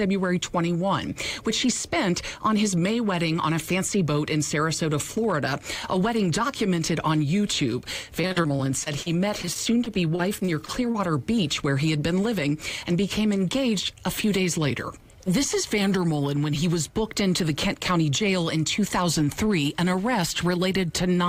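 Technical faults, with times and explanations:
8.21 to 10.96 s, repeated packet loss (robotic sound): About twenty short holes open up in quick succession across this stretch, none longer than about 39 ms. Each hole is covered by stretching out the sound that came just before it. Roughly 0.43 s in total is filled this way, about 16% of the span. Around 0.36 s of the original sound is simply gone. The constant repeat-and-skip gives a choppy, mechanical, robotic texture.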